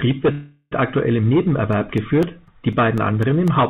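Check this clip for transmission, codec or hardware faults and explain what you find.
Two faults are audible: a call audio freeze early on and a run of periodic USB or driver dropouts in the second half. The band stops at 4 kHz throughout, which fits the narrowband G.711 call path.

From 0.32 to 0.73 s the sound stalls and is replaced by a buzzy continuation of the last moment that fades, lasting about 0.39 s. When the audio resumes it picks up exactly where it stopped, so nothing is lost. The timing simply shifts about 0.39 s later. The likely cause is packets held up in transit, which drained the jitter buffer so the receiver had to extend the last sound until delivery restarted.

From 1.73 to 3.48 s, small ticks occur every 0.25 s, about seven in total. Each is a brief hole of silence, roughly a millisecond long, that clicks against the signal around it. This even spacing points to a background task repeatedly blocking the USB bus or audio driver, so a tiny slice of audio is dropped and replaced with silence on each cycle.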